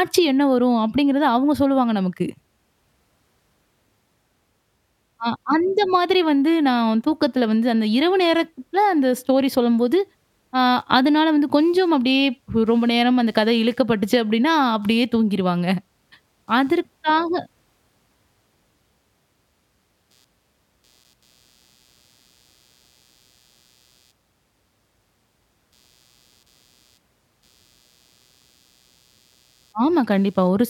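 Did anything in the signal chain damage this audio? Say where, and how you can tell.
Yes. The analogue wiring picked up computer activity noise through a shared ground. From 10.78 s to the end of the clip, a faint buzzing chirp sits about 45 dB below the speech. It pulses at roughly 150 Hz and jumps up and drops back with the computer's activity, not the speech. Load swings in the processor, graphics card or mouse pull the common ground up and down, and the audio input reads that ripple as signal.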